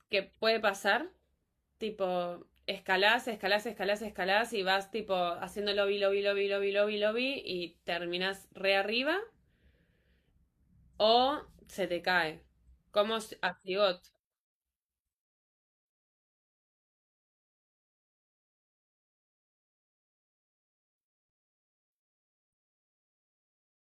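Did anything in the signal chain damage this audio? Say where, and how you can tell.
No, nothing along the way seems to have hurt this speech recording; I can't hear any point where a stage in the chain left its mark on it.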